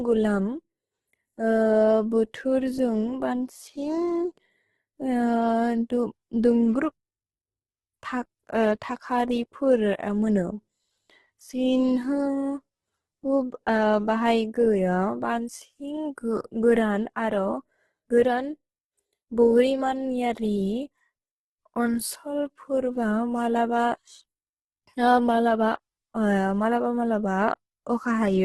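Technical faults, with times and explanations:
Throughout, Opus compression: the speech is rough, grainy and noisy, with nothing above 12.2 kHz. This likely comes from heavy Opus coding in its music mode, which fills starved bands with noise or folded copies. The damage fits a very low rate, around 12 kbps.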